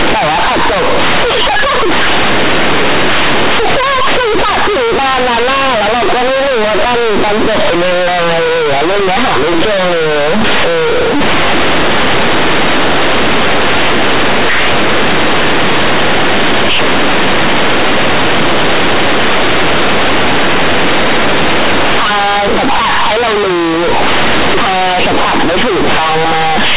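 Throughout the speech, companded audio is read as linear: mu-law bytes are played as plain 8-bit samples without expansion, so each sign change swings across half the output range. Quiet passages become as loud as speech, producing harsh, buzzy distortion and heavy noise in pauses, within a 4 kHz telephone band.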